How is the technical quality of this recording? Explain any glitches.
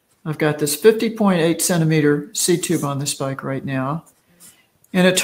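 One glitch stands out. From 4.01 to 4.93 s the sound is cut by the noise suppressor, which mistook it for noise and pulled it down by up to about 12 dB over roughly 0.7 s. The waveform's envelope visibly sinks there, and the spectrogram shows that stretch dimmed.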